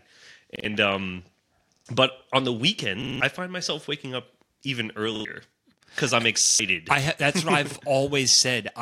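New audio arrived late six times, so the output replayed its last block, a repeated buffer of about 46 ms that fits a 2048-sample buffer. Hard-joined stutters sound at 0.56, 1.77, 3.02, 5.16, 6.46 and 7.71 s, longest around 3.02 s.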